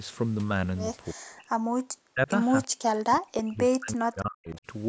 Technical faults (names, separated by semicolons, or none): speech suppressed in double talk; echo leak